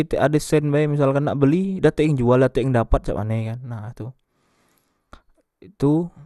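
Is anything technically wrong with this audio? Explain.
Yes. Throughout the speech, nothing sounds above 12.2 kHz, and the tone is dull, gurgling and granular. The likely cause is low-bitrate MP2 compression switching off upper sub-bands and coarsely quantising the rest.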